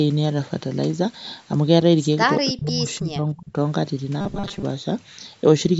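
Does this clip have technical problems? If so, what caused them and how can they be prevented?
Yes. From 2.51 to 3.56 s the speech sinks by as much as about 30 dB for roughly a second, which is speech suppressed in double talk, likely from an echo canceller ducking the near talker while the far side spoke. A full-duplex-capable canceller or a headset prevents it.

From 4.21 to 4.64 s the sound turns into a rigid metallic buzz at 200 Hz. This is robotic sound from repeated short buffers, likely caused by starved audio delivery, with about half the audio replaced by repeats of a 5 ms buffer. Larger buffers or steadier scheduling prevent it.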